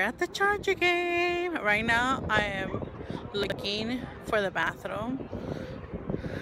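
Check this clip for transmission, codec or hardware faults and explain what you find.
Two short jumbled moments, at 3.44 to 3.52 s and 4.63 to 4.69 s, are chunks out of order. A 21.33 ms block played three blocks late, then two late, so the sound jumps at each hard join.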